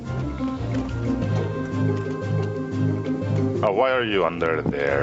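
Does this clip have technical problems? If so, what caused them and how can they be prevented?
Yes. Gain pumping runs through the whole clip: the level is pulled down under each loud sound, a level swing of roughly 15 dB, with loud and soft passages squashed close together. The likely cause is input gain set far too high, forcing a fast limiter or compressor to clamp down on every peak. Unlike a noise gate, which cuts quiet parts to silence, pumping raises them between loud sounds. The top end stopping near 8 kHz is normal call microphone processing. Lowering the microphone gain so peaks stay below the limiter's threshold prevents it.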